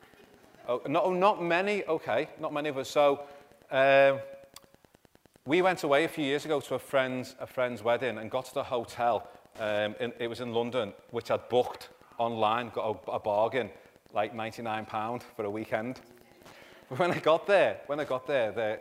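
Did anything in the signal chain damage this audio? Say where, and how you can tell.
Yes. Wi-Fi interference runs through the whole clip, entering at the analogue wiring stage. A steady tick repeats every 102.4 ms, about ten per second, roughly 30 dB below the audio. A nearby Wi-Fi radio's beacon bursts are being rectified by the analogue circuit and heard as clicks.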